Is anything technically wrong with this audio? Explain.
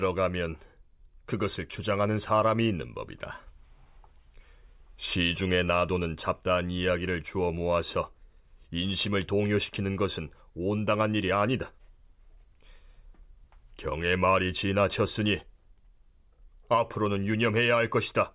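No, nothing technically wrong turns up anywhere in this speech recording.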